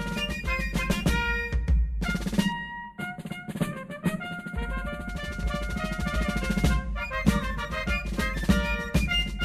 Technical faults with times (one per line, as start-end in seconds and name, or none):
2.52-5.09 channel delay (comb filtering)